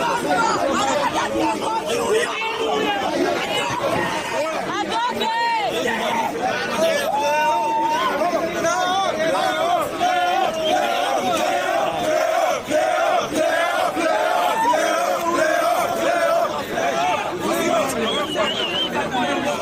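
No technical faults can be heard anywhere in the audio. Nothing in it calls for a timestamp or a description of a problem.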